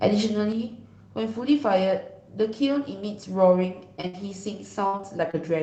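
At 0.52 s the level of the speech falls abruptly by about 6 dB and stays down until the end of the clip. This is most likely one channel dropping out: once the stereo pair is summed to mono, only half of the shared signal remains.

From 4.01 to 4.05 s there is short concealed packet loss. About 20 ms of audio never arrived, and the decoder covered roughly 15 ms of the hole by extending the preceding sound before blending back in. The result is a brief smear in the speech.

From 4.07 to 4.15 s comes a burst of packet loss of about 60 ms. The receiver fills it by continuing the last sound and fading it out, which gives a short held buzz or dying hiss. The audio then resumes further on, and the section in between is missing.

From 4.87 to 5.35 s there is repeated packet loss with a robotic sound. Four separate gaps, the longest 61 ms, remove about 120 ms in total, and concealment fills about a quarter of the span. 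The speech turns choppy, with pieces dropped out.

Throughout the clip, the Opus call path limits the audio bandwidth to 8 kHz, runs at about 24 kbps and adds its usual coding noise.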